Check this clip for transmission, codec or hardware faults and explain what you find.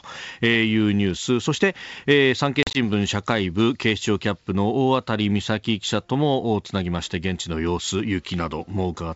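One transmission fault is present. The G.722 wideband coding at 64 kbit/s is not one; its faint upper-band hiss is normal for that codec.

At 2.63 to 2.77 s there is packet loss on an ADPCM call. About 70 ms went missing across 120 ms, the longest gap 40 ms, which fits around seven lost packets. The lost packets are replaced by hard-edged silence, and the decoder's predictor desynchronises, so the speech returns slightly distorted.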